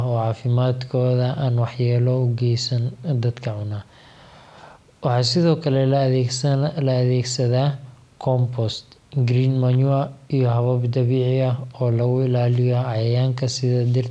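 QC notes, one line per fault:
Nothing to flag on this one; the speech runs along without a single audible fault anywhere in it.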